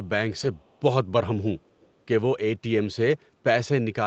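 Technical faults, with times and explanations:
0.39–0.45 s and 2.83–2.85 s, lost packet rebuilt from error correction: the sound turns briefly rougher and noisier but never drops out. Lost stretches, about 40 ms and 20 ms, were filled from the low-bitrate copy Opus carries in the following packet.
0.59–0.81 s and 1.81–1.88 s, echo leak: a very faint copy of the sound trails about 0.35 s behind, well below the main signal. A likely cause is a loudspeaker on the far side whose echo canceller let some pickup through.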